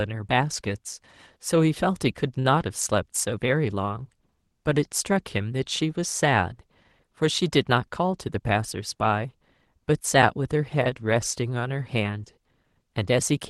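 Speech over a call codec path whose audio extends to about 12 kHz, consistent with Opus. A short stall from a late packet occurs at 2.39–2.46 s: the jitter buffer ran empty, and the receiver stretched the preceding sound by about 54 ms until the packet arrived, losing nothing. A jitter buffer speed-up follows at 7.75–8.40 s, where repeated pitch-period cuts totalling about 50 ms make the speech run at 107% speed with unchanged pitch, sounding hurried.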